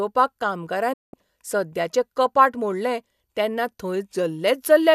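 At 0.93 s, a digital broadcast dropout: the receiver lost valid frames and muted. The speech fades within 8 ms, dropping about 192 ms, and returns on "सद्याचे कपाट मोडलें तेन्ना".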